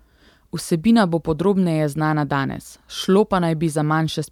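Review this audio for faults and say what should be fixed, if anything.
Nothing stood out on listening to this speech recording, so there is nothing that needs fixing.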